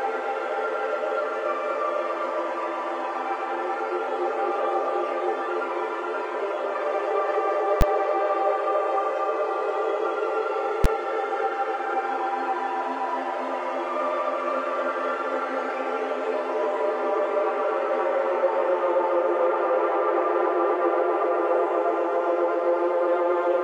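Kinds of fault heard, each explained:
Invalid numbers at full scale: infinite or invalid calculation results pinned the output to maximum level, heard as brief loud bangs at 7.81 s and 10.84 s.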